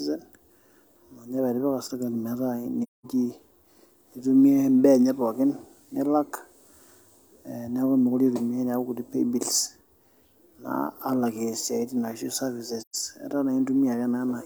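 At 2.83 to 3.06 s and again at 12.81 to 12.95 s the speech drops into silence, a case of AAC frame loss with muting: the decoder zeroed the spectrum of missing frames. The first gap, about 0.21 s, points to roughly five lost frames; the second, about 0.13 s, to three. Overlapping windows taper each edge, so the waveform shows a smooth fade into a flat line and back, and the spectrogram shows a clean, full-band blank strip.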